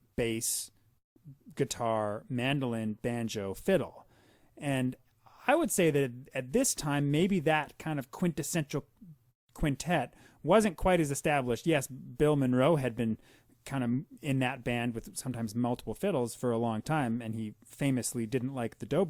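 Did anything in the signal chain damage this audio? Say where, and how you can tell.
No, nothing in the signal chain has audibly damaged this speech recording. No stage from capture through to playback leaves a mark that can be heard here.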